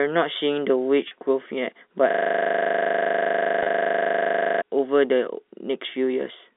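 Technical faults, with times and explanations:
1.08–1.11 s and 3.63–3.66 s, packet loss with pitch repetition: In each gap about 30 ms of audio went missing, which points to a single lost packet, and the receiver filled it by repeating the last pitch period while fading it down. Because the gap is so short, the repeat never reaches silence; it comes through as a brief held, slightly buzzy tone before the speech carries on. The second one falls inside the loop below.
2.11–4.62 s, system hang loop: The computer or its audio driver stalled while the sound hardware kept replaying the same 40 ms stretch of its ring buffer, around sixty times in a row. That exact repetition at 25 times a second is heard as a rapid, mechanical stutter, closer to a machine-gun rattle than a steady buzz, lasting about two and a half seconds. It sits on top of the band-limited G.711 telephone line.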